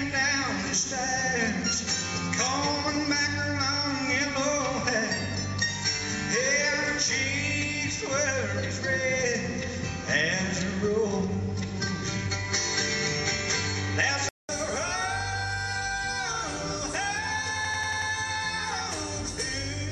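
From the start until 14.49 s the audio is band-limited, with nothing above 7.6 kHz, a separate background noise roughly 30 dB below the signal, and a level about 5 dB different. A 200 ms silence then marks the change. This points to the input having likely switched to a poorer device, not to simple filtering, because the noise floor and level change along with the bandwidth.

From 17.65 to 18.11 s a system hang loop repeats one 93 ms piece exactly five times, at 10.8 Hz. That length fits a 4096-sample buffer. It sounds like a machine-gun stutter rather than a dropout, since the same fragment comes back identically and little or no audio is lost.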